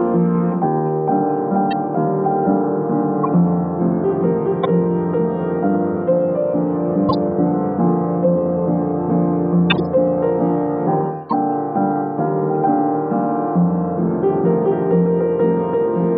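Corrupt frames decoded at 1.71, 3.23–3.26, 4.63–4.66, 7.09–7.14, 9.70–9.80 and 11.29–11.33 s: damaged frames played anyway give chirps and noise bursts, strongest at 9.7 s.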